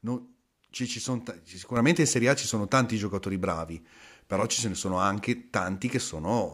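A speech recording with a sudden gain jump at 1.77 s, right after "ci ci sono": the level steps up by about 7 dB from one sample to the next and stays there until the clip ends at 6.54 s. Voice and background noise rise together with no ramp, so this is a step in the signal's digital gain, not a change in the talker's delivery. The likely cause is a gain setting or bit shift applied mid-stream without smoothing.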